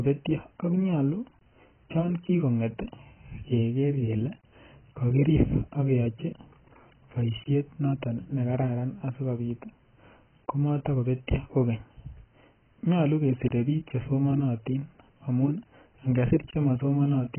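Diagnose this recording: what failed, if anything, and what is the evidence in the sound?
Heavy AAC compression at the codec stage is the likely cause of the damage running through the whole speech recording. Nothing survives above about 3.1 kHz, so sibilants sound dull and smeared, and sustained vowels carry a warbling, fizzy texture. A spectrogram would show a hard ceiling at 3.1 kHz with patchy, flickering holes below it. The waveform would look normal. Damage this severe fits a very low bitrate, around 12 kbps.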